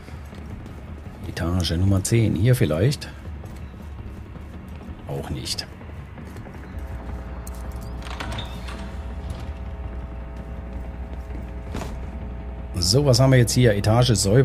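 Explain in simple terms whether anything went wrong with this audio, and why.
Something in the recording chain picked up electricity from the power line, most often through a ground loop or a transformer sitting too close to the cables. That leaked into the audio as mains hum: from 6.72 s to the end, a steady low buzz at 60 Hz runs underneath everything. It is fairly prominent, only somewhat quieter than the sound itself, so it's easy to notice in the second half of the clip.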